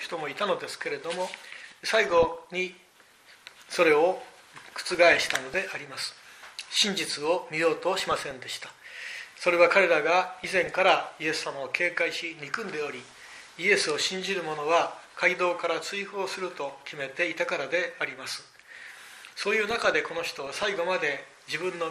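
Throughout, the sound is dull and granular with gurgling upper bands, consistent with plainly audible MP2 compression at around 80 kbps, which likely explains the starved, flickering treble. DAB burbling appears at 2.08–2.45, 4.89–5.57, 7.98–8.31, 10.34–10.85, 13.07–13.64 and 19.67–20.64 s: corrupted sub-band data causes short blips of noise over the programme.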